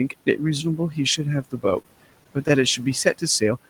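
Noise suppressor artifacts run through the whole clip: the suppressor pulls down bands it judges to be steady noise by about 18 dB, so the room noise, which sits about 18 dB below the speech, dips between phrases and swells back under them. On a spectrogram the noise floor looks blotchy, darkening in pauses and filling in around speech.

From 1.43 to 1.64 s the speech is cut by the noise suppressor. It mistakes quiet parts of the speech for noise and turns them down by as much as about 18 dB, for roughly a tenth of a second in total. These parts sound swallowed. The waveform shows short, sudden troughs in the envelope, and the spectrogram shows faded patches inside the speech.

Between 1.82 and 2.50 s come repeated stalls (stutter). The jitter buffer keeps running dry, and the receiver stretches the last sound to bridge each wait, filling about 58 ms in all, with the longest gap 20 ms and nothing lost. 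The sound drags and hiccups. The spectrogram shows brief smeared, repeated slices.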